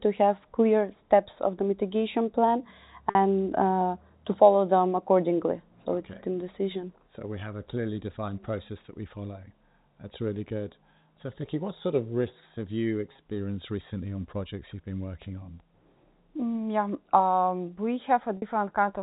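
Three short dropouts show packet loss with pitch repetition, heard through the usual 4 kHz ceiling of the G.711 telephone coding. At 3.10 to 3.15 s and 18.37 to 18.42 s, about 50 ms goes missing, which fits five 10 ms packets. The receiver loops the last pitch period to fill it, so the sound briefly holds on a slightly buzzy tone. At 13.13 s the same 50 ms is scattered over 120 ms in runs of no more than 20 ms.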